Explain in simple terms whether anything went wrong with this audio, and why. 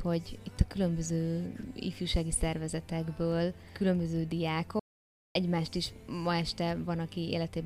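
The sound cuts out to dead silence from 4.80 to 5.35 s, about half a second lost: an audio dropout to silence, likely from a briefly disconnected or muted input.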